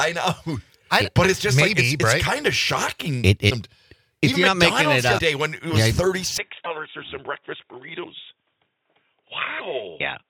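At 3.49 to 3.52 s, and again at 5.17 to 5.20 s, the sound skips forward with a brief chirp or spurt of noise. Each glitch lasts about one 24 ms frame, which fits MP3 at 48 kHz. The likely cause is a broken MP3 bit reservoir. Frames were lost, and the next frame reached back for borrowed bytes that now belonged to a different frame. It decoded garbage instead.

At 6.38 s the sound turns dull and boxy. Nothing passes above 3.8 kHz from there to the end. The level falls by about 5 dB. A faint new noise floor appears, roughly 55 dB below the signal. There is no gap at the change. This likely means the input switched to a poorer device with a narrower band and its own noise.

The same reservoir glitch returns at 6.64 to 6.67 s, 8.03 to 8.06 s and 9.59 to 9.62 s. Each is another short glitch and jump.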